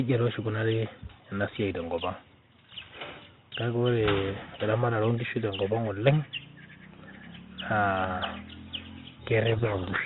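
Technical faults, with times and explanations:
9.52 to 10.05 s, codec payload misread: in the last half second the speech is suddenly buried in harsh, rasping distortion. The G.726 code words are being read with their bits in the wrong order, so each valid-looking value decodes to the wrong quantized difference from the adaptive prediction and the output wanders off into broadband grit. On a spectrogram the clean harmonic bands dissolve into a dense smear capped near 4 kHz; the waveform turns jagged and noisy right to the end.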